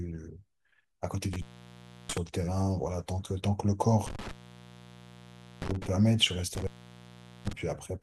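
The speech cuts out three times with crackle at each edge, at 1.33–2.18 s, 4.07–5.87 s and 6.55–7.53 s, for about 0.67 s, 1.31 s and 0.78 s. That is intermittent contact, a loose cable or plug briefly opening the line.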